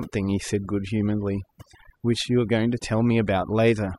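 Throughout, overdone noise removal gates individual frequency bands near the noise floor, leaving a near-silent background with twinkling specks, seen as isolated spectrogram dots.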